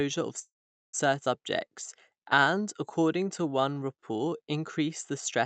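At 0.39 s the speech halts in a call audio freeze lasting until 0.95 s. The last sound stretches on briefly, then about 430 ms of silence follows. The likely cause is delayed packets draining the jitter buffer. Speech then resumes exactly where it stopped, with nothing lost.

From 1.25 to 1.28 s there is a skip ahead. Roughly a third of a second of speech is missing. Playback jumps forward with almost no gap. The two sides are joined nearly directly, so the speech lurches abruptly.

Between 2.14 and 4.38 s comes a jitter buffer slow-down. The buffer was rebuilding its reserve by repeating single pitch periods. This adds 244 ms, so speech runs at 89% speed. Pitch stays the same. Sounds become drawn out. The Opus call path caps the top end at 8 kHz.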